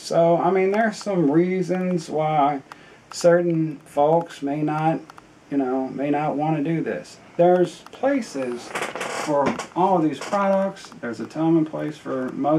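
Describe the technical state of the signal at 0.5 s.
At 0.5 s the signal is intact, with no dropout, distortion or other technical fault to be heard at that point.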